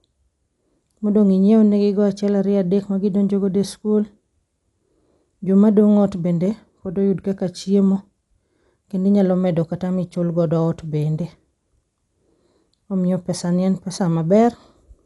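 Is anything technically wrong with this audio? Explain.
Yes, the speech is plainly damaged by coding. Throughout, likely Dolby Digital compression at a low bitrate, perhaps 64 kbps: bands without mantissa bits become dither noise, so it sounds dull and rough, and a spectrogram shows a hard cutoff at 11.4 kHz with speckled noisy fill.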